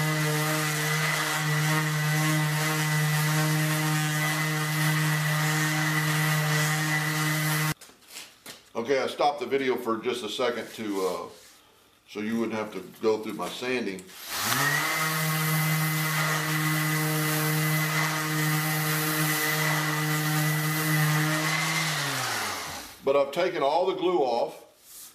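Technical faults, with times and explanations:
No technical faults can be heard anywhere in this audio. There is nothing to time or explain.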